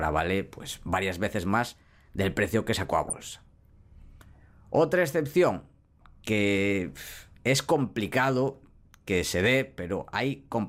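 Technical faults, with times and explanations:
3.03 to 3.13 s, DAB burbling: right after "precio que sacó a" there's a short burst of burbling. Weak reception let bit errors, around 0.2 percent, slip past error correction into the MP2 data, so short noise blips land in single sub-bands, which fits about five corrupted frames.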